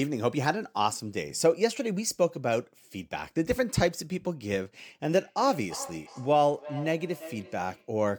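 From 5.09 to 7.95 s, feedback echo between two devices: another device's playback re-enters the microphone, repeating speech roughly every third of a second, about 16 dB down, as distinct copies rather than a reverb smear.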